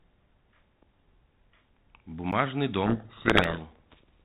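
At 2.32 s a block of digital silence of about 11 ms drops the sound to zero with no fade, fitting a missed 512-sample buffer. Being so short, it is heard as a tick or dip rather than as silence. A second, 4.6 ms gap at 3.44 s is similarly brief. From 2.86 to 3.61 s a codec payload misread, likely the G.726 code words' bit order reversed between ends, buries the speech in harsh distortion. Unlike the light coding damage of the working telephone codec, this rasp swamps the speech until 3.61 s.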